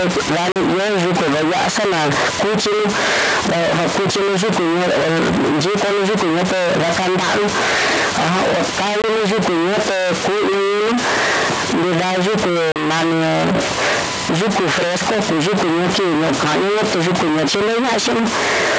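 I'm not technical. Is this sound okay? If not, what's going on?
No. Stuck bit, throughout: a distortion sits on the speech and fills the quiet pauses with noise, likely because one digital data bit is stuck at a fixed value.

Packet loss on an ADPCM call, at 0.52 s, 9.02 s and 12.72 s: sharp silent holes of 40, 20 and 40 ms where pieces of the call went missing. The decoder then loses step with the sender, so the speech returns with brief, slight distortion before settling.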